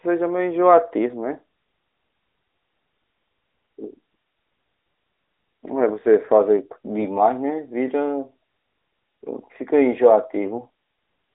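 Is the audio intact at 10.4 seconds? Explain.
No. From 10.44 to 10.51 s there are AMR bit errors: a weak radio link flipped some of the less protected bits in the mobile codec's frames, around one bit in twenty. The checks on the critical bits still passed, so the decoder played the data as received, with excitation pulses in the wrong positions and the finer pitch, gain and spectral values off. For those 70 ms, where two frames were hit, the speech keeps its rough pitch and level but turns hoarse, scratchy and gargly.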